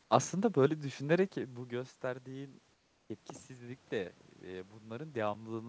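Comfort noise in place of the background, from 2.74 to 3.10 s, right after "düşünerek bu gösterdiğin ııı": for about 360 ms the real room sound gives way to a smooth, featureless hiss roughly 4 dB quieter, likely because the sender paused transmission during silence and the receiver synthesised filler noise.

Automatic gain rising, from 3.47 s to the end: the input fell by about 16 dB, so the gain control slowly raises its amplification. Speech and background swell together over the final couple of seconds instead of holding a steady level.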